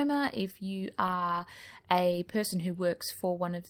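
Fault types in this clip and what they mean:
Lost packet rebuilt from error correction: dropped packets were filled from the next packet's low-bitrate copy, so no gap, but rough, noisy patches after "if you".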